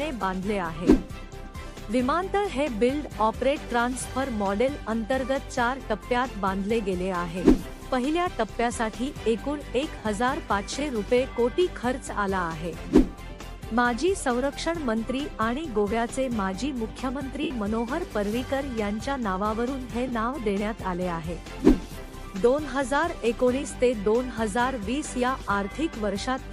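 Lost LE Audio frames at 9.98 s (45 ms), 17.43 s (75 ms) and 20.08 s (22.5 ms). The LC3 decoder fills each gap by repeating the last spectrum with scrambled signs, so tones smear into noise and the longest gap fades, fitting 7.5 ms frames. The light compression causes only slight damage.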